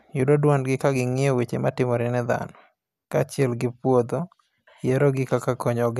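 No technical faults can be heard in this speech recording. There is nothing here to mark with a time or explain.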